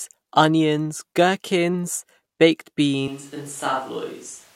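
At 3.08 s, right after "onions gherkins baked", the speech turns abruptly roomy and hollow until the end, most likely a switch to a distant microphone. The waveform drops by roughly 5 dB. The spectrogram loses low-frequency energy, and a room noise floor about 25 dB below the speech fills the gaps between words.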